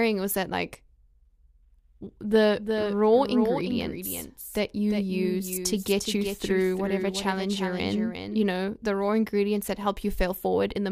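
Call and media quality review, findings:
Doubled audio track, 2.56 to 8.46 s, starting just before "the raw ingredients that". Speech repeats roughly 0.4 s late, about 5 dB down, full-band. No decay or room colour and an abrupt on/off, so not acoustic echo. Likely a second, slower capture path mixed in.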